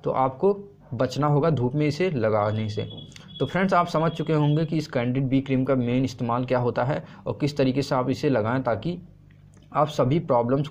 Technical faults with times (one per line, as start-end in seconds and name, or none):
none